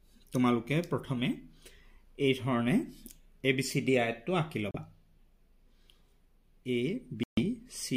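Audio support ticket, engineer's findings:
Two short dropouts to dead silence, with the sound picking back up after each. First at 4.71 s, 32 ms of silence. Second at 7.23 s, longer, 138 ms of silence before it picks back up at 7.42 s. Pattern points to a Bluetooth stall, likely radio interference: packets held up, headphone buffer ran empty, playback paused until the resends landed.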